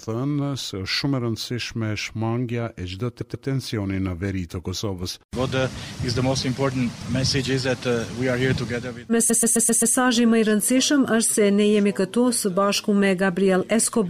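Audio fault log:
3.20–3.46 s, repeated frames: a short stutter where the same 130.6 ms slice of sound plays twice more in a row. The same block of compressed frames was written again, about five frames' worth, so the decoder replayed it and the clip gained 261 ms.
9.29–9.94 s, repeated frames: a longer stutter that loops the same 130.6 ms block five extra times. Replaying a duplicated run of compressed frames makes the sound hang in a rhythmic loop and adds 653 ms to the clip.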